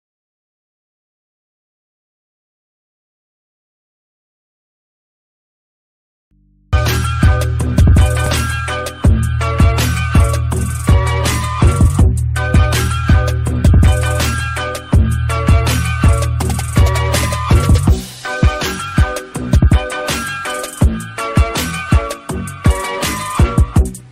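At 6.31 s the audio cuts out abruptly and returns at 6.73 s, a gap of about 0.42 s. This is an audio dropout to a faint residue. Only mains hum remains, roughly 40 dB below the signal. The likely cause is a momentary signal loss while the input stayed live.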